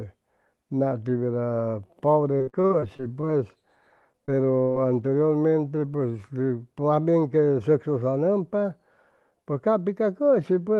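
From 2.37 to 3.39 s, repeated packet loss (robotic sound) breaks the audio into eight short holes, the longest 55 ms. Each is filled by extending the previous sound, so about a quarter of that stretch is synthetic and comes out choppy. A milder burst follows from 4.13 to 4.78 s, with four gaps of up to 23 ms.

From 9.31 to 9.53 s, a jitter buffer speed-up trims whole pitch periods to shed excess buffered delay. Around 40 ms is removed, so this passage runs at about 113% speed with unchanged pitch and sounds briefly hurried.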